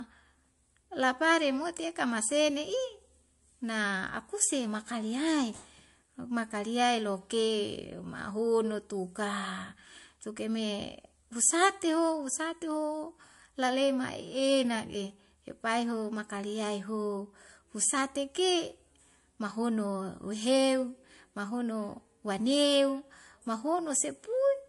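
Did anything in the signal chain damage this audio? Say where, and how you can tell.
Yes, at the codec stage: the speech stops dead at 11.3 kHz throughout, a hard spectrogram ceiling, with watery swirl from flickering weak bands. The likely cause is low-bitrate MP3 compression.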